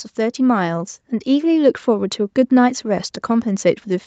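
Automatic gain rising begins at 0.17 s and continues to the end of the clip. The gain control judged the input too quiet and kept raising its level, so the speech and the background noise swell together steadily. Above about 8 kHz there is nothing, which fits the call codec's band limit.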